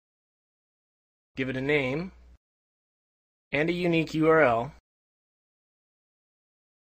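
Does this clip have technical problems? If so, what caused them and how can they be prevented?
No, there are no technical problems to point to here. Nothing in the audio calls for a cause to track down or a fix to prevent.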